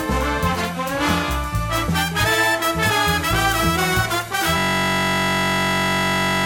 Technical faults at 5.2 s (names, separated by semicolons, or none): system hang loop